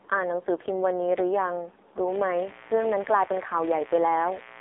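From the start, the speech runs through an AMR narrowband mobile codec, squeezed into 300 Hz to 3.7 kHz, heavily buzzy and synthetic, which fits a low mode around 5.9 kbps. At 2.07 s a raspy 60 Hz mains buzz from switching spikes comes in, roughly 20 dB under the speech, and stays until the end.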